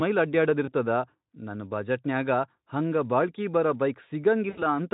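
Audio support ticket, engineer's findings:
VoIP packet loss concealed by the speech codec, 0.65–0.73 s and 4.49–4.74 s. Decoder extrapolating last pitch and filter: buzzy or noisy smeared stretch, fading gain, weak recovery after packets resume. First fits one lost 20 ms frame, second about four frames (80 ms). Speex decoder path.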